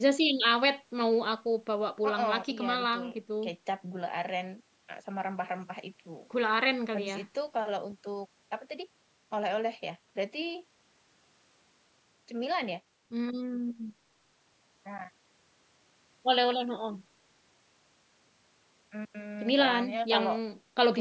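Speech that has passed through a call's microphone processing, with the lowest bass trimmed by its high-pass filter and nothing present above 8 kHz, and no technical fault to report.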